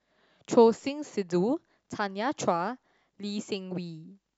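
Speech recording, with no technical faults to report. Nothing in it calls for a time or a cause.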